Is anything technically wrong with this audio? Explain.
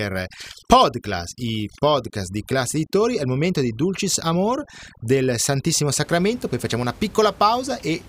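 Yes. From the start to about 6.04 s, just before "poi facciamo una", there's overdone noise removal. The reduction is pushed so hard that bands near the room-noise estimate get gated out along with quiet bits of speech, leaving near-silent gaps full of twinkly specks. The room noise itself sits about 24 dB under the speech.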